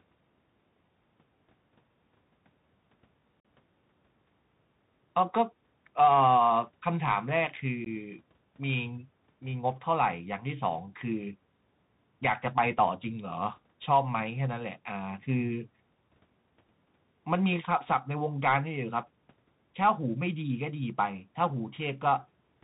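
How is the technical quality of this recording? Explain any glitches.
The speech is muffled and narrowband throughout, with nothing above about 4 kHz. S sounds come out scratchy, loud bright moments break up, and a grainy hiss sits underneath. This is the Bluetooth CVSD headset codec, which fits a 64 kbps link. It codes each sample as a single up-or-down bit with an adaptive step size, so it cannot follow fast high-frequency movement.

At 3.40 to 3.45 s the sound drops out for about 45 ms, and again at 7.85 s for about 15 ms. Each gap has abrupt edges, and the speech returns quieter for a moment. This is unconcealed Bluetooth headset packet loss. Several short voice packets in the first gap and a couple in the second never arrived, and silence or an idle pattern filled their place instead of any smoothing.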